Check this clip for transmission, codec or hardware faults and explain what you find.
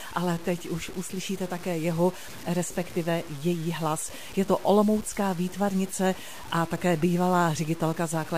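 One fault runs through the whole speech clip: low bit depth without dither. Quiet passages sound grainy, and the softest tails sputter or drop to silence. The likely cause is truncation to about 6 bits with no dither, which leaves an error that follows the signal at roughly 20 dB below it. On the waveform, the quiet stretches show coarse stair steps. On the spectrogram, broadband hash sits under the speech and disappears in the pauses.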